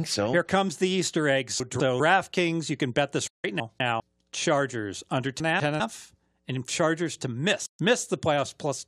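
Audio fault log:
1.6–2.0 s, 3.6–4.0 s, 5.4–5.8 s: chunks out of order. Each is a brief jumbled stretch where a 200 ms chunk plays one slot late, leaving hard joins.
3.27–3.45 s and 7.66–7.80 s: digital broadcast dropout. The sound fades out over about 8 ms into silence of 160 ms, then 128 ms, as the receiver mutes on bad frames.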